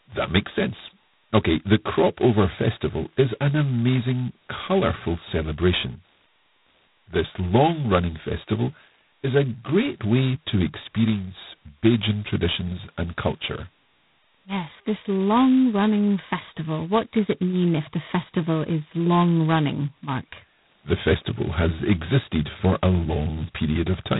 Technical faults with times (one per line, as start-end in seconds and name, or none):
0.00-24.19 G.726 ADPCM